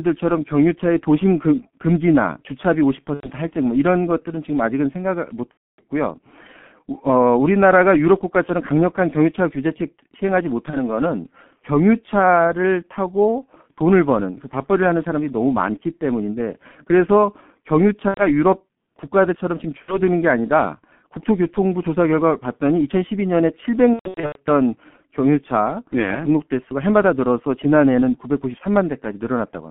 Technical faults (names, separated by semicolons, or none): G.723.1 codec; VoIP packet loss concealed by the speech codec